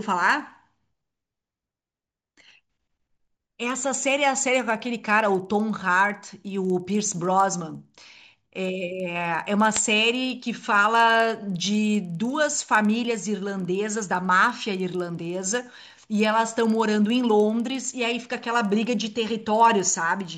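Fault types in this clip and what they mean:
Resampler restarted on every block: Each 50 ms block was converted alone, so its edges lacked their true neighbouring samples. Every seam carries a small error. The errors repeat at 20 Hz, giving a ticking buzz that rides on the speech.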